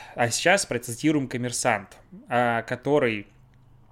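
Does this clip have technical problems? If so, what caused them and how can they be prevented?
No, there are no technical faults to point to in this speech recording. With nothing going wrong, there is no cause to trace and nothing that needs preventing.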